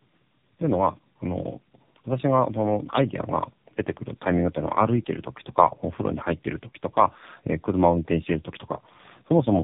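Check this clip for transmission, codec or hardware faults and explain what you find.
There's one fault, and it runs through the whole clip: tandem speech coding. The speech has passed through two low-rate speech coders in a row, which fits a G.729-to-AMR path. The second coder re-encodes the first one's already degraded output, so the errors compound. The result sounds rough, muffled and warbly, with nothing above 3.7 kHz.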